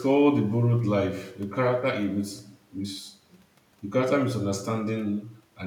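No technical faults can be heard anywhere in the recording.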